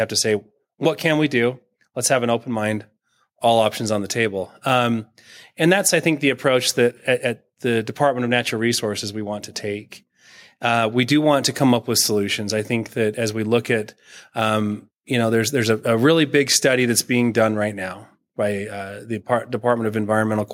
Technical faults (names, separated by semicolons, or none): none